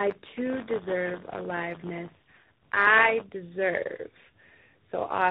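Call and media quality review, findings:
Tandem speech coding, whole clip. AMR-NB at 7.95 kbit/s, then G.711 mu-law, then CVSD at 64 kbit/s: two speech coders in series, each re-coding the last one's damage. Rough, muffled, warbly speech, nothing above 3.8 kHz.

Buffer tearing, 0.0 to 3.27 s. Playback writer and hardware reader out of step on the ring buffer, crossing every period. A small slice of each period holds audio from about 20 ms earlier. Steady robotic 100 Hz buzz, fitting a 10 ms period, present only with signal.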